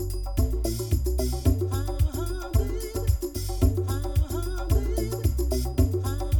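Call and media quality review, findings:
Channel delay (comb filtering) throughout. Hollow, phasey tone from fixed, evenly spaced spectral notches, first near 150 Hz. One channel lags by roughly 3 ms before mono summing; shared content cancels at regular intervals. Probable component: stereo downmix or capture alignment.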